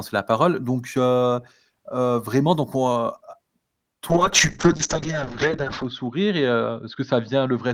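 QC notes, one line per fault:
4.10 to 7.74 s, call bitrate drop: the call's bandwidth estimate collapsed, so the encoder was forced to spend far fewer bits on the speech, with a sound that points to a fall from roughly 32 kbps to about 10 kbps. Coding turns coarse and rough, and the top end is cut from 20 kHz down to 8 kHz, leaving the voice muffled and watery. The worst stretch lasts about 1.75 s, and quality does not recover before the clip ends.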